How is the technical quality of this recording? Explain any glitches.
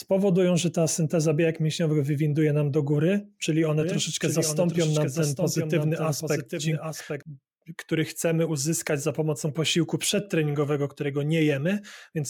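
The recording has one clear glitch, a doubled audio track. From 3.81 to 7.23 s a second full-band copy of the speech trails the original by roughly 0.7 s, a little quieter and dry, cutting in and out abruptly. It is likely a second capture through a slower path mixed back in.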